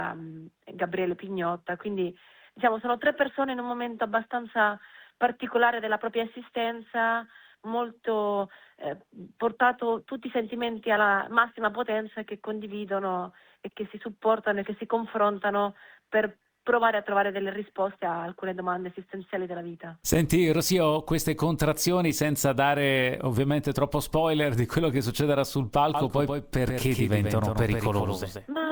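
From 25.94 s to the end, every sound is followed by a second copy of itself, about 5 dB quieter, trailing by roughly 150 ms. The copy switches on abruptly, with no fade, and carries the full frequency range with no reverberant tail. This doubled audio track likely comes from the same signal being captured again through a slower route, or from an edit that leaves two copies out of step.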